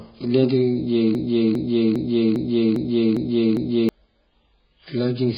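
Throughout the speech, the signal has been squeezed hard by what is likely AAC compression, with heavy damage consistent with AAC-LC at a very low bitrate, around 12 kbps. The encoder has discarded everything above roughly 5.1 kHz and coarsely quantised what remains, so the voice sounds dull and muffled, sibilants lose their edge, and sustained sounds take on a smeared, warbling, fizzy texture.

From 1.15 s to 3.89 s, a stalled player or stream keeps resending the last fragment it holds, which is the likely cause of a broken-record loop. A 403 ms slice of speech plays seven times back to back with no gap, producing a mechanical, stuttering repetition. The audio that should have filled those 2.7 seconds never arrives, and normal playback resumes only after 3.89 s.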